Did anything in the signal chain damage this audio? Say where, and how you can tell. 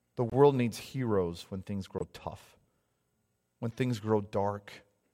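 Yes. Corrupt frame muted, at 0.30 to 0.33 s, just before "needs heroes when things", and again at 1.98 to 2.02 s, just after "needs heroes when things". This is a codec-stage fault. Damaged compressed frames failed to decode and were replaced with silence. Each gap opens abruptly and the timing is kept. The first gap's length fits a single frame, and the slightly longer second gap suggests two consecutive frames.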